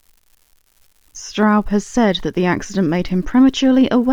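A steady crackle or fizz runs under the speech from start to finish and carries on through the pauses. It comes from an unreliable data bit: one marginal data line flips at random, each error a fixed-size spike of about -33 dBFS.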